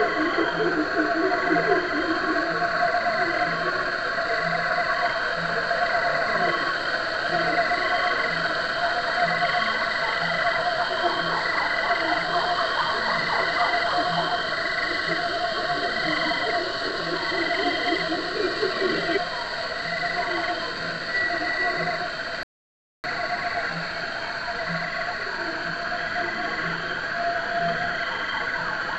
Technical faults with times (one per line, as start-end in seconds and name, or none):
22.43-23.04 playback stall